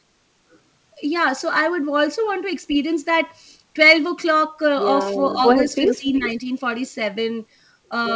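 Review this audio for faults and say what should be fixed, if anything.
From 5.71 to 6.29 s, a second, delayed copy of the speech sits under the live talker, trailing it by 365 ms and only slightly quieter than the speech itself. This is an echo leak, likely from a far end playing the call on a loudspeaker whose echo canceller let part of its microphone pickup through and sent it back. To prevent it, the far end should use a headset or better acoustic isolation and an echo canceller tuned for that room and device delay.

Starting at 5.87 s and running to 6.45 s, overlapping that echo, the talker's level sinks in pieces, at its deepest by around 15 dB, for roughly a third of a second in total. This is speech suppressed in double talk. Both sides were active at once, and the echo canceller likely could not tell the near talker from the returning echo, so it turned everything down together. 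To prevent it, use echo cancellation with proper double-talk detection, and remove the leak so the canceller is not forced to suppress so hard.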